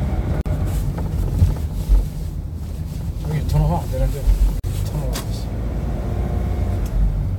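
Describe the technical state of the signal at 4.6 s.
Separately encoded pieces were joined untrimmed, leaving encoder delay and padding. This causes a gap at the join, a 41 ms silence from 4.60 to 4.64 s.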